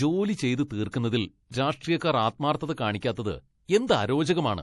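Throughout the speech, the treble stops dead at 11.4 kHz and faint high detail flickers in and out, leaving sibilants watery and swirly. The likely cause is MP3 compression, and the sound fits a bitrate around 48 kbps. A spectrogram shows a hard ceiling with blinking upper bands.

From 1.51 to 1.54 s, a short 26 ms hiss runs just ahead of the attack before "രാഷ്ട്രീയക്കാർ ആത്മാർഥത". This is pre-echo: the codec spread its noise across the whole block, filling the silence before the onset and softening it. A spectrogram shows a thin noise smear leading the attack.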